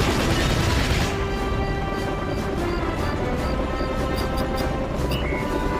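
No faults detected anywhere in the audio; nothing to log.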